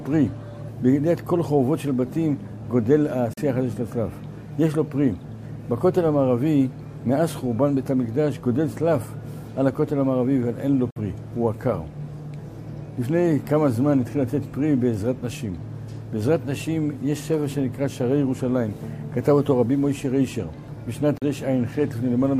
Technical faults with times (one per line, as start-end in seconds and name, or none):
3.33-3.38 Bluetooth dropout
10.90-10.96 Bluetooth dropout
21.18-21.22 Bluetooth dropout